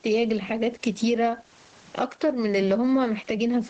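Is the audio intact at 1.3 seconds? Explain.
No, not really. At 1.3 seconds you're hearing the same gain pumping that runs through the whole clip. The level swings by something like 15 dB, so the speech sounds squashed and flattened. The likely cause is input gain set far too high for the microphone, with a fast limiter clamping down on every loud sound.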